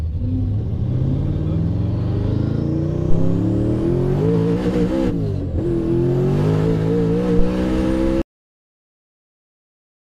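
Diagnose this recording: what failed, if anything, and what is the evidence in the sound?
Two phantom power thumps hit the analogue input, at 3.10 s and 7.39 s, each a deep low thud, decaying over about 83 ms and 23 ms. Phantom power got switched on or off on a live input, and the step came through the coupling capacitors.

There's also a cut-off end at 8.22 s. The audio stops dead mid-sound into digital silence with no decay, so the final buffers never got written or played.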